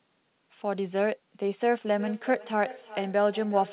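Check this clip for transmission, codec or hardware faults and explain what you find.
One fault is present in this speech. Feedback echo between two devices runs from 1.85 s to the end. A second device in the room replays the call, the first microphone recaptures it, and neither echo canceller removes the other's output. Speech returns roughly every 0.4 s, thin and ringing, peaking about 15 dB below the direct speech. The band stops at 4 kHz, which fits a G.711 mu-law call codec.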